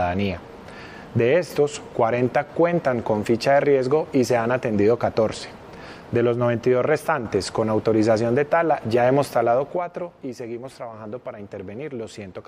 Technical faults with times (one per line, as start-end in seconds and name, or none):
9.50-10.08 zipper noise